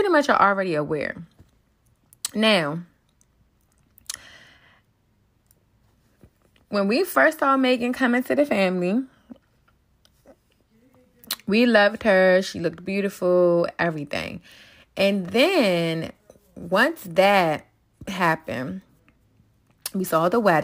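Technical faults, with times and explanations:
14.22 to 20.63 s, sample clock jitter: the converter's clock wavers by several microseconds, so each sample lands slightly off time, and the error tracks the waveform's slope. The speech gains a hiss about 25 dB down, roughest on loud, bright syllables, gone in pauses.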